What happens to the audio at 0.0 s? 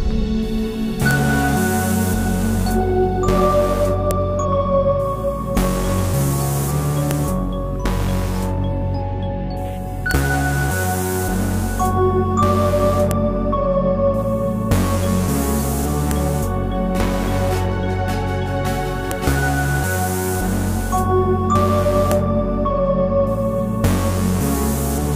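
Nothing goes wrong at 0.0 s; the audio is intact at that moment.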